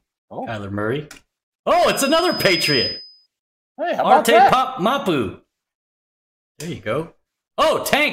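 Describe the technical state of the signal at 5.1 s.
At 5.1 s the signal is intact, with no dropout, distortion, glitch or other fault audible at that moment.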